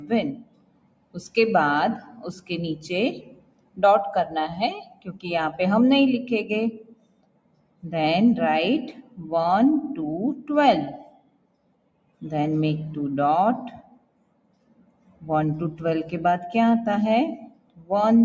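A speech-tuned noise suppressor was left running on this sound throughout, treating held material as noise, so levels pump by around 20 dB. The sound cut by the noise suppressor sinks at 0.0–1.16 s, 1.99–3.79 s, 4.83–5.25 s, 6.72–7.84 s, 8.95–9.19 s, 10.41–12.22 s, 13.76–15.24 s and 17.37–17.91 s, dropping by up to about 18 dB, so tails and sustains thin out. The call's band limit, with nothing above 8 kHz, is normal.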